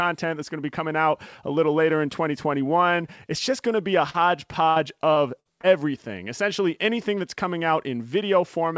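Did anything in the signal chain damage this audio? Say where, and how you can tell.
Yes. The damage happens in the network stage of the call. Short concealed packet loss appears at 4.10 to 4.16 s. About 40 ms of audio arrived too late to decode. The receiver extended the preceding sound to cover the hole and then blended back, which leaves a brief smear.

Repeated packet loss, with its robotic sound, runs from 4.70 to 5.65 s. Four separate gaps are patched in quick succession, and the longest is 60 ms. About 18% of that stretch is synthetic fill. The sound turns choppy there. The call codec's band limit, with nothing above 8 kHz, fits G.722.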